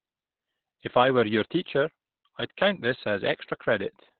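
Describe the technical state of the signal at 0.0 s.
At 0.0 s you're already hearing Opus voice compression, and it runs through the whole clip. The speech is squeezed into narrowband, with nothing above about 4.3 kHz, and the excitation is coded coarsely, so it comes out muffled, hoarse and slightly robotic, which fits a bitrate around 8 kbps.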